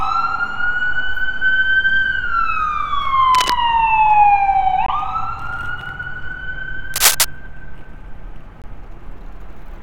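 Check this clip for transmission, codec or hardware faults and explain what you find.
Two kinds of fault turn up, each twice: bursts of scratching and brief silent holes.

Cable scratch noise: From 3.35 to 3.52 s, and again from 6.94 to 7.25 s, a dense, ragged rustling sits over the sound. The first burst is a little below the signal level, the second somewhat louder than it. The likely cause is a worn cable or connector being moved, its contact resistance jumping erratically.

Bluetooth dropout: At 4.86 to 4.90 s and 8.62 to 8.65 s the audio cuts to silence for about 21 ms, then resumes as though it had kept playing. This likely comes from a wireless packet arriving too late and being discarded, and the gap length fits a single lost frame.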